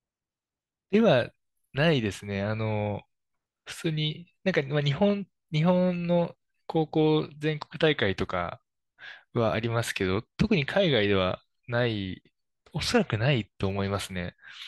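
A speech recording with no technical faults audible anywhere in it: no dropouts, clicks, distortion or glitches interrupt the signal at any point.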